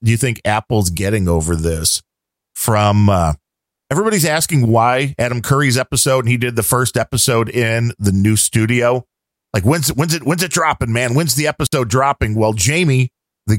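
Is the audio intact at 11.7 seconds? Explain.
No. At 11.7 seconds the speech drops out in a digital wireless dropout running from 11.67 to 11.73 s. For about 60 ms the sound falls to near silence. The wireless link lost too much data to rebuild the signal, so the receiver muted its output with a very fast fade rather than pass on corrupted audio. The gap is clean. No click, hiss or noise burst comes before or after it.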